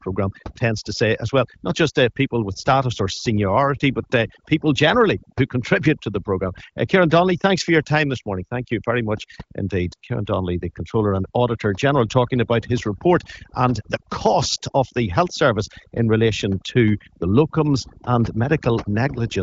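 Overdone noise removal runs throughout this speech clip: an over-aggressive denoiser pulls individual frequency bands down whenever they sit near its noise estimate, so the background drops and breaks up into twinkling specks while quieter speech detail vanishes with it. The band-limited, clear HD Voice character, with nothing above about 7.5 kHz, fits an AMR-WB call at a mid-to-high rate.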